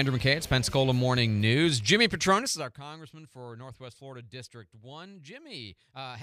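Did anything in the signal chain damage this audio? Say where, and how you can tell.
Yes. Between 2.39 and 2.76 s there is zipper noise at the gain stage in the driver or buffer path. While the level falls by around 20 dB, a fine ticking rides on the sound at roughly fifty ticks a second. Each tick marks a 1 dB jump in gain applied without smoothing, which fits the gain being updated once per buffer.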